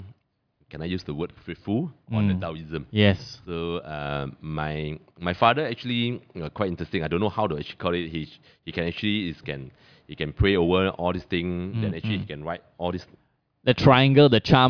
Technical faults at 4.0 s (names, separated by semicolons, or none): none